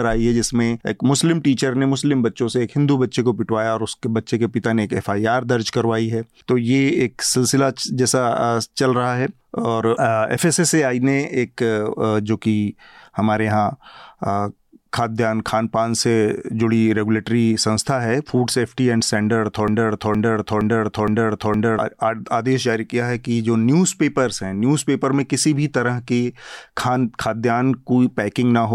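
A broken-record loop runs from 19.68 to 21.79 s in this speech recording: a 0.47 s fragment repeats exactly five times back to back. The player or stream likely stalled and kept replaying its last held fragment, so the speech due in that span is missing.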